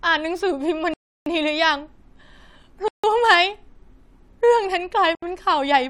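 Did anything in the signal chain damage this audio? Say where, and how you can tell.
Yes. The speech drops to dead silence three times, at 0.94 to 1.26 s (about 330 ms), 2.88 to 3.04 s (about 155 ms) and 5.15 to 5.23 s (about 73 ms), and each time it resumes with no fade. This is most likely a Bluetooth stall at the playback stage: packets delayed by radio interference emptied the headphones' buffer, so output halted until the resent data arrived. The waveform flatlines at each gap, and the spectrogram shows blank, full-band vertical stripes with sharp edges.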